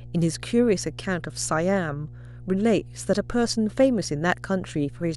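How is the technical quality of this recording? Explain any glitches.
The recording has two technical faults: a constant hum and two brief overloads near the end.

Mains hum runs throughout. A steady 60 Hz tone from a ground loop or nearby transformer sits roughly 20 dB below the speech, audible in every pause.

Hard clipping occurs at 3.80–3.85 s and 4.30–4.32 s, with peaks driven about 2 dB and about 4 dB past full scale. The flattened tops produce short bursts of crackle.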